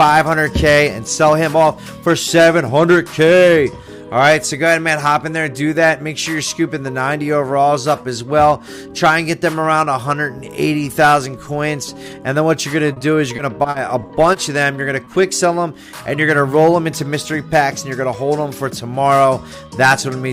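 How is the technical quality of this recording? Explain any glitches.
Two packet-loss glitches are audible, both near the end.

From 12.93 to 14.36 s, repeated packet loss (robotic sound): eight gaps, longest 40 ms, are patched by extending prior audio, giving choppy texture with pieces missing rather than one isolated smear.

From 15.04 to 15.08 s, short concealed packet loss: a single 20 ms hole is filled by continuing the preceding sound, leaving a brief smear or wobble, unlike the sustained robotic stretch before it.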